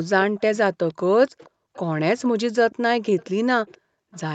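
Right from 0.27 to 0.40 s the room background gets gated by the echo canceller. It clamps the mic down by about 40 dB while the far end plays, so the ambience briefly vanishes. The same dips come back at 1.40–1.74, 2.43–3.01 and 3.78–4.12 s.

From 0.40 to 1.78 s, and again from 2.71 s to the end, there's a faint repeat of the speech trailing 478 ms behind. It's roughly 30 dB down at first, then nearer 25 dB down. That's likely an echo leak, where the loudspeaker's sound slipped past the far side's echo canceller and got sent back.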